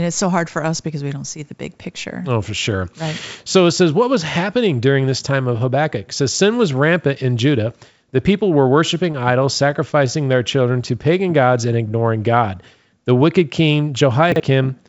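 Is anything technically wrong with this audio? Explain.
Yes, there are two faults.

From 9.12 to 10.10 s, just after "people were", there are scattered short gaps. About seven packets arrived late or went missing, and the receiver patched each hole by extending the preceding sound, roughly 70 ms in all, none much over 15 ms. The result is brief ticks and smeared hiccups.

From 14.32 to 14.40 s, just after "wicked king", a 40 ms chunk arrived one slot late, leaving chunks out of order. It plays after the piece that should follow it, creating three abrupt joins. The moment sounds jumbled, with nothing actually missing, all heard through a call path that carries nothing above 8 kHz.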